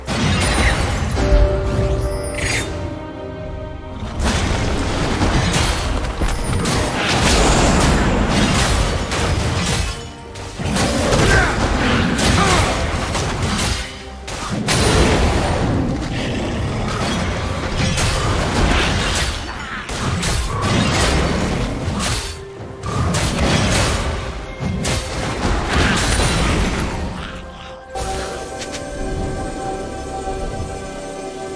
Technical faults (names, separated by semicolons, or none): none